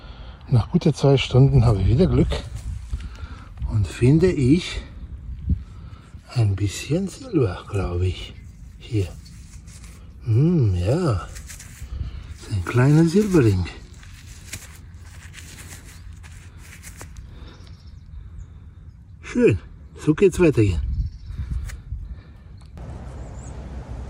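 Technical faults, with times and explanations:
Nothing stood out as a technical problem on listening.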